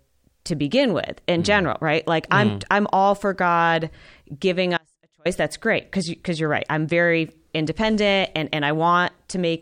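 An audio dropout to a faint residue runs from 4.77 to 5.25 s. The speech cuts off abruptly for about 0.48 s, leaving only a faint trace of sound roughly 35 dB down, likely from the signal path breaking while the input after the break stayed live.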